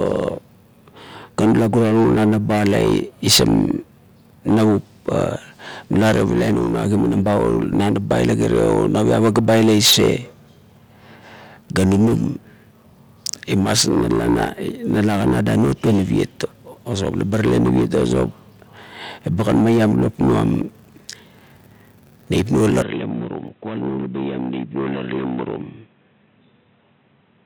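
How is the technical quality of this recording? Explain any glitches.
The recording has two kinds of fault: brief skips at two points, and a loss of clarity over the final few seconds.

Dropped buffer (overrun), at 7.73 s and 23.48 s: the speech jumps ahead, with roughly 20 ms and 30 ms missing. The likely cause is that the software fell behind, so the hardware overwrote those samples and the two sides were spliced together.

Input switched to a poorer device, from 22.82 s to the end: the sound turns dull and boxy, with the level falling by about 10 dB and new background noise about 40 dB below the speech. This likely comes from the system changing to a narrower-band microphone mid-recording, with no gap at the switch.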